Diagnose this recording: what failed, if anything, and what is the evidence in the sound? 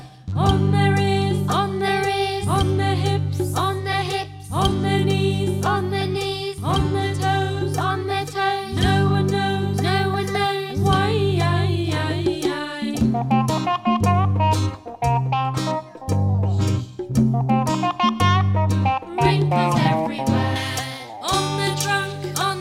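Pre-emphasis left on, from 20.56 s to the end at 22.6 s. The treble jumps to about 11 dB hotter at 10 kHz than at 1 kHz, turning the sound thin and spitty, which fits a J.17 curve whose de-emphasis never happened at the receiving end of the transmission chain.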